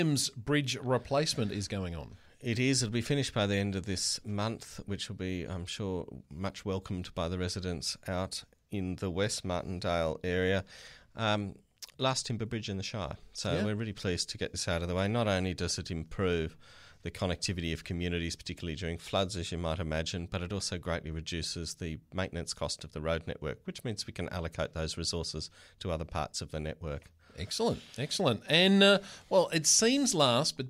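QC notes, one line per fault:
Nothing stood out on listening.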